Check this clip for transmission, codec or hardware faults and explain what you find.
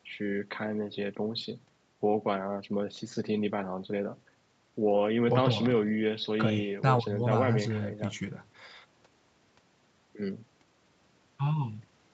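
Nothing stood out on listening to the speech, which carries the expected 8 kHz ceiling of a wideband call path.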